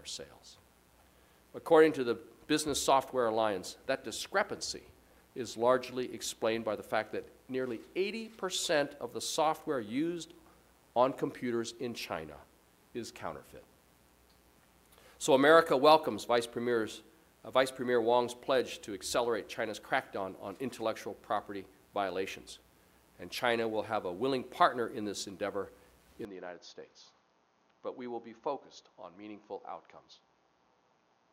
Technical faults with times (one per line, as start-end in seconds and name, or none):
26.25-31.33 input switched to a poorer device